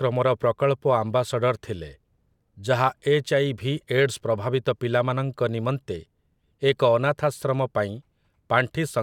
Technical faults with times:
none

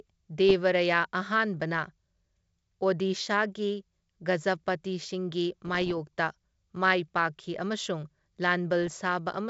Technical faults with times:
0.49-0.53 bit errors on an ADPCM link
5.66-5.95 bit errors on an ADPCM link
8.82-8.90 bit errors on an ADPCM link

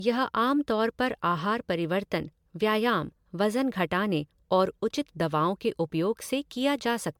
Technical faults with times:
0.00-7.19 generation loss

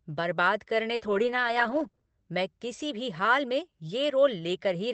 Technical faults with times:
0.95-2.03 repeated packet loss (robotic sound)

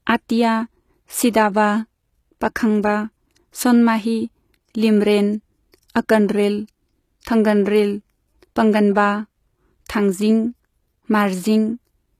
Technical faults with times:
0.00-12.19 HE-AAC compression
1.32 pre-echo
5.72-5.90 pre-echo

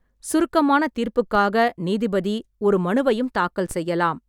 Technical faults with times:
1.35 DC step
3.71 DC step

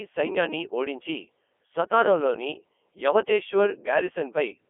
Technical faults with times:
0.00-4.69 Codec 2 vocoder

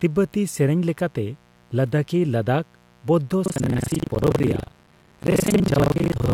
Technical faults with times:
0.00-6.33 mains buzz
3.44-6.33 buffer tearing

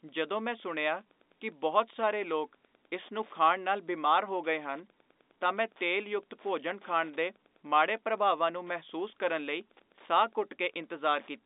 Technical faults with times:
0.00-11.45 Wi-Fi interference

